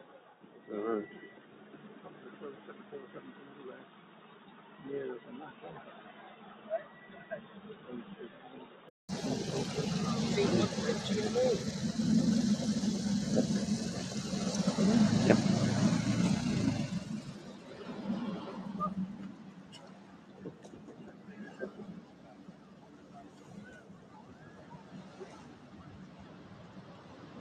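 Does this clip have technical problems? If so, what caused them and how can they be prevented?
Yes. A noise suppressor applied to music or sounds runs throughout, treating sustained tones and tails as noise and pulling them down by around 15 dB while attacks pass, so the sound pumps, flutters or thins. Prevent it by disabling speech noise suppression for non-speech sources.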